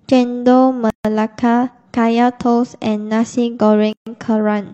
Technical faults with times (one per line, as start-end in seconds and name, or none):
0.90-1.05 gap at a join of encoded pieces
3.93-4.07 gap at a join of encoded pieces